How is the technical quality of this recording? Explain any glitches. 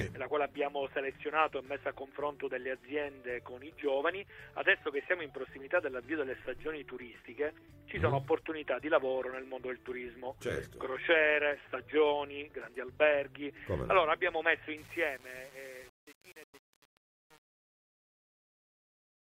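The recording has one clear glitch, at the end.

Truncation distortion on a fade runs from 14.77 s to the end at 19.25 s. The fade-out is processed at too low a resolution and without dither, consistent with roughly 7-bit precision. As the level drops, the waveform collapses into coarse square steps, so the tail turns gritty.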